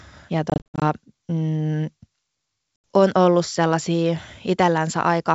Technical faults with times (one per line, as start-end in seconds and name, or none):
0.50-0.83 packet loss on an ADPCM call
2.76-2.84 packet loss on an ADPCM call